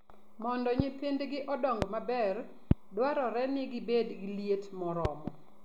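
Loud pops break through the speech at 0.80–0.82 s, 1.82–1.85 s and 2.71–2.74 s, and a double pop comes at 5.05–5.30 s. Each is a sharp thump about 20 to 25 dB above the speech, which carries on underneath. The likely cause is a voltage pulse from a plug, switch, static or driver glitch. On a waveform each shows as a tall, narrow spike. A spectrogram shows a thin vertical broadband stripe.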